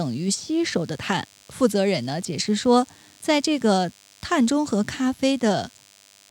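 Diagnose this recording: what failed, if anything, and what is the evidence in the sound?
The fault sits in the analogue wiring. A DECT cordless phone buzz runs under the speech throughout, thin and steady, with many harmonics on a 100 Hz base, roughly 30 dB below the speech. A nearby DECT handset or base sends a radio burst every 10 ms. The audio circuit rectifies each burst, and the repeating pulses are heard as the buzz.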